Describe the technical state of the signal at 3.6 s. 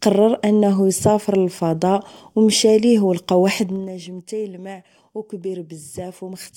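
Near the start of zipper noise, which runs from 3.56 to 3.92 s. The speech is being pulled down by something like 15 dB, but the gain moves in hard 2 dB jumps, around thirty a second, with no smoothing between them. Every jump leaves a tiny click, so you get a fast ticking or zipping riding on the speech while the level drops.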